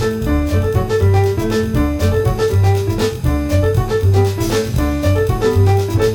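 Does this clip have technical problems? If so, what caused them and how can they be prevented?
Yes: channel delay (comb filtering) runs throughout. One channel lags the other by roughly 20 ms, and summing to mono cancels evenly spaced frequencies from around 20 Hz upward, giving a rough, slightly doubled sound. The notches stay fixed, unlike a flanger's sweep. Prevent it by aligning the channels before any mono fold-down.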